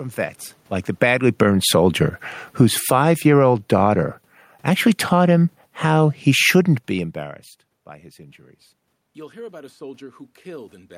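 Right after "vets like", at 0.87 s, automatic gain falling sets in: the gain control judges the speech too loud and pulls its gain down by about 8 dB until 1.71 s, so voice and room noise sink together. It then reverses with automatic gain rising from 1.22 to 2.17 s, lifting everything by about 7 dB in a slow swell. The cycle repeats: gain falls about 12 dB from 2.45 to 3.48 s, rises about 6 dB from 3.39 to 4.22 s, then drifts down about 6 dB from 4.52 to 7.23 s. Each time the background moves with the speech, unlike the talker's own shifts in distance near 0.5 s and 6.5 s.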